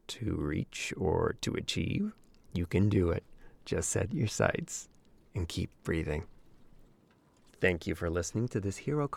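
Nothing stood out as a technical fault on listening to the speech here.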